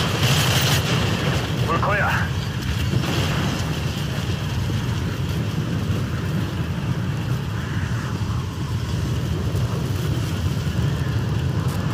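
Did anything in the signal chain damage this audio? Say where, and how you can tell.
Yes, there is Wi-Fi interference in the analogue wiring stage, from 9.55 s to the end of the clip at 11.94 s. A steady tick repeats every 102.4 ms, close to ten per second, sitting roughly 30 dB below the wanted sound. That spacing matches a Wi-Fi beacon interval. A nearby radio's RF bursts are being picked up by the analogue circuit and rectified into audible clicks at each transmission.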